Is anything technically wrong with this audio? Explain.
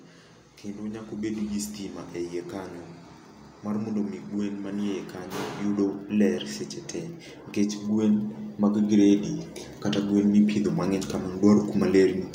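Yes. Automatic gain rising occurs from 0.76 to 1.61 s and 7.55 to 9.31 s: the gain control judged the input too quiet, so speech and background swell together by about 4 dB, then about 6 dB.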